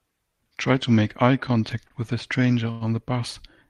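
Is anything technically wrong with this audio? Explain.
Yes, there are two short stalls from a late packet in this speech. Around 1.87 to 1.93 s a sound is held about 29 ms too long, and at 2.71 to 2.84 s there's a longer hold of about 96 ms. Each time the jitter buffer ran dry waiting on a packet, so the receiver stretched the last sound and then picked up right where it left off. Nothing is lost, but you get a drawn-out moment with a faint buzz or dip.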